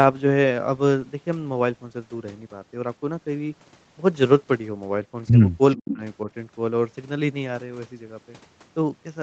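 Speech suppressed in double talk hits this speech recording from 5.76 to 6.02 s, where the talker's level falls by around 35 dB for roughly a fifth of a second, most likely because an echo canceller facing both sides at once turned everything down. An echo leak overlaps it from 5.77 to 5.95 s: a copy of the speech returns 435 ms late at around 15 dB below the main level, the likely result of a loudspeaker-side echo canceller failing to remove all of what its microphone picked up.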